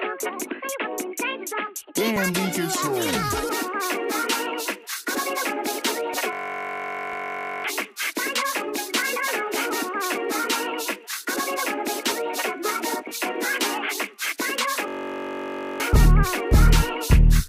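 Overlap between stream segments at 2.16 s: two segments claimed the same stretch of time, so the player trimmed sound that was never actually duplicated. A few milliseconds disappear and the waveform jumps, giving a tiny skip.

System hang loop from 6.33 to 7.64 s: the system stalled while the audio hardware kept replaying its ring buffer. One 21.33 ms slice repeats at 46.9 Hz, which fits a 1024-sample buffer. It is heard as a steady buzz, and about a second and a half of real audio is lost.

At 7.13 s, inside that buzz, a second overlap between stream segments cuts out another sliver, adding one more tiny skip.

The system hang loop returns from 14.88 to 15.80 s with the same 21.33 ms loop buzzing at 46.9 Hz, replacing roughly a second of audio.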